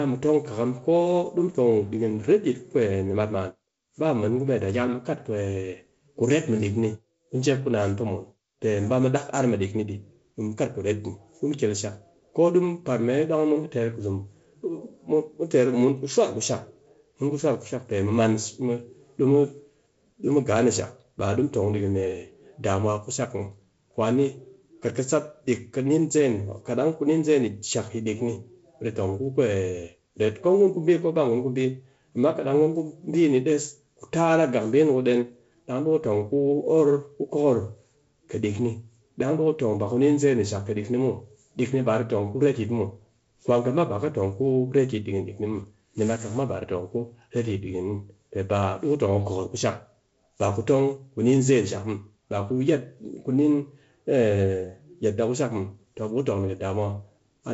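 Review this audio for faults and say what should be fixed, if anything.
No faults heard here; nothing needs fixing.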